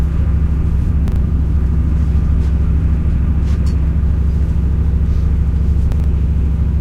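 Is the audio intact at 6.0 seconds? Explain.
No. Between 5.92 and 6.04 s the sound has chunks out of order: one 40 ms chunk of audio was delivered or written two chunks late, so it plays after the two chunks that should have followed it. Nothing is missing, but the 120 ms stretch is reassembled in the wrong sequence, leaving three hard joins where unrelated pieces of the waveform meet. The result is a brief garbled, jumbled moment right around 6.0 s.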